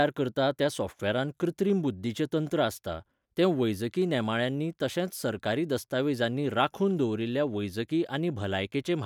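Nothing goes wrong anywhere in this speech recording, so there's no fault to point to at any moment.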